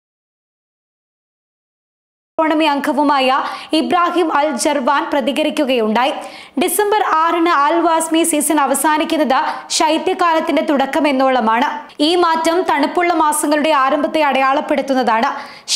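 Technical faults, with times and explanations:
0.00–2.39 s, audio dropout to silence: the clip opens in silence with no room tone at all, then the sound cuts in abruptly at 2.39 s, already mid-flow. The input was likely lost or muted while the recorder kept writing silence.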